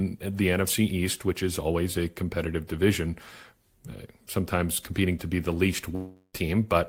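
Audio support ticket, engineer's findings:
Long network dropout, 5.95–6.35 s, right after "to be the least". Likely packet loss. Receiver smears last sound into fading buzz about 0.38 s, then returns with that chunk gone.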